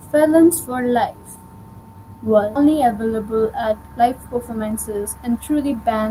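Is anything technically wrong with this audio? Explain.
Yes, two faults.

At 2.55 to 2.57 s there is a skip ahead: about 0.4 s of speech was dropped while later audio was already queued, and playback went on with no gap. The speech jumps forward, with the two sides of the missing stretch butted straight together.

From 4.50 to 5.94 s there is a jitter buffer speed-up: the buffer held more than its target, so the receiver repeatedly cut out short pitch-period pieces, about a tenth of a second in total. Speech runs at 108% speed at unchanged pitch and sounds hurried.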